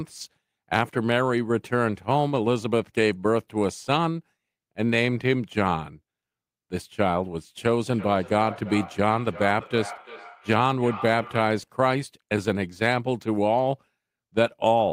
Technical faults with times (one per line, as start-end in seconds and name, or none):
7.89-11.70 feedback echo between two devices